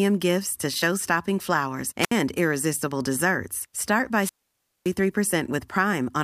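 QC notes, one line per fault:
2.00–2.12 s, wireless microphone squelch dropout: the radio signal weakens and a short swell of hiss precedes about 66 ms of near silence as the receiver's squelch shuts the output, then the speech returns. The rising static before the gap separates it from a clean digital dropout.
4.17–4.94 s, wireless microphone squelch dropout: a longer dropout, with hiss building before a mute of about 570 ms, long enough to leave a clear hole in the speech.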